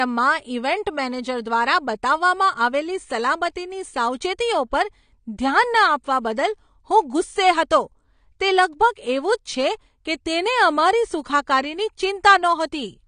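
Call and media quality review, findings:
AAC compression, whole clip. Speech comes across dull and smeared, nothing above 9.7 kHz, plainly audible fizz and warble on sibilants. Likely an AAC-LC encode starved of bits, fits something like 32 kbps, so the encoder cuts the top end and quantises what's left coarsely.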